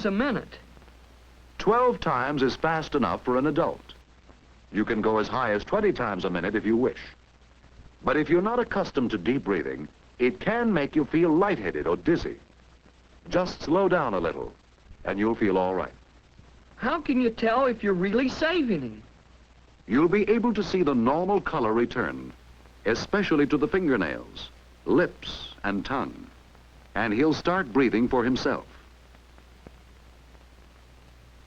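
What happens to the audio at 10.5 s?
At 10.5 s the audio sounds dull, with nothing above 8.7 kHz and more codec artefacts. This is an adaptive stream at a lower bitrate, from 4.0 to 22.0 s: the player abruptly switched to a leaner encoding, which fits a drop to around 12 kbit/s Opus.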